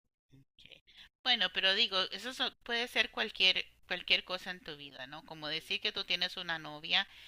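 Speech, with a single dropped buffer (overrun) at 5.98 s. There the sound skips ahead by a few milliseconds with no gap, heard as a small jump in the voice. The likely cause is the recording program failing to collect a buffer before the hardware overwrote it, so the two sides were spliced directly. On a waveform this shows as an abrupt discontinuity, and on a spectrogram as a thin vertical broadband line.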